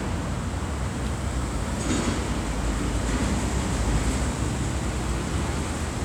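A short recording of everyday sounds, and nothing technically wrong turns up anywhere in it, so there's no fault here to point to.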